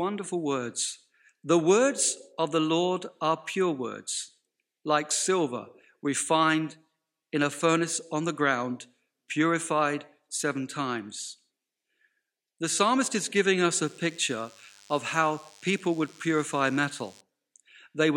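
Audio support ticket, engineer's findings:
DECT cordless phone buzz, 13.84 to 17.21 s, kicks in after "psalmist is giving us". Thin, steady 100 Hz buzz with lots of harmonics, well below the speech. Nearby DECT handset/base bursting every 10 ms; analogue input rectifying it.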